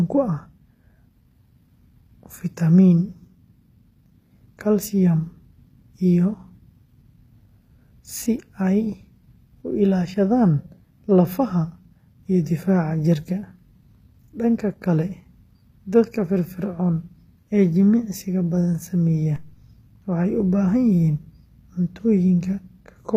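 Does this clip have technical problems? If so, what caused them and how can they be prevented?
Yes. Throughout this speech the treble has a gritty, metallic edge: s sounds come out lispy, and nothing is present above 15.5 kHz. The cause is likely HE-AAC compression at a low bitrate, around 24 kbps by the sound of it. The upper band is rebuilt by copying lower bands upward rather than coded directly, so the highs stay bright but their harmonics don't line up with the body of the sound. That misalignment is what separates it from plain low-pass dulling or MP3 swirl. Encoding at a higher bitrate, or with plain AAC-LC, would prevent it.

At 19.36 s there is a single DC step. The waveform's zero line jumps and then drains away as a high-pass around 2 Hz pulls it back to centre, giving one low thump while the speech carries on unchanged. A dropout or click from lost data would interrupt or damage the sound itself, but here only the baseline moves. 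Keeping DC blocking ahead of the converter and avoiding switching inputs or recalibrating mid-recording prevents it.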